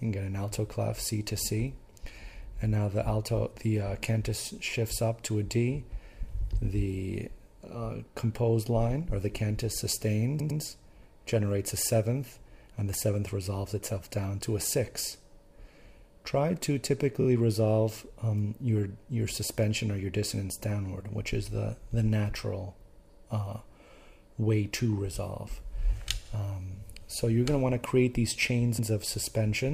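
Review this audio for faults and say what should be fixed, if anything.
The audio stutters four times, with a short stretch replaying immediately as repeated frames. At 10.39 to 10.60 s, a 104.5 ms block plays twice more. At 17.20 to 17.26 s, a 26.1 ms block plays twice more. At 26.24 to 26.30 s, a 52.2 ms block repeats once. At 28.78 to 28.88 s, a 104.5 ms block repeats once. Block lengths fit whole compressed frames of about 26 ms that were written or sent again, and the decoder played each copy, lengthening the audio by about 0.42 s in total. To prevent this, track frame sequence numbers or timestamps when writing or receiving the stream and discard any frame already delivered.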